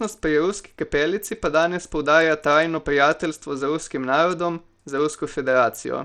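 Throughout the speech the treble flickers and thins under a gritty, aliased haze, likely Bluetooth SBC compression starving the top sub-bands, which fits a bitrate near 80 kb/s.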